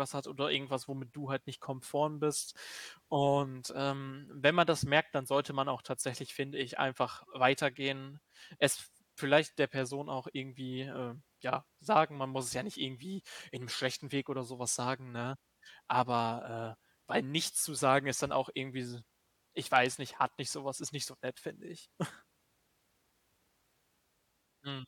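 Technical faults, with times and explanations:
No technical faults detected.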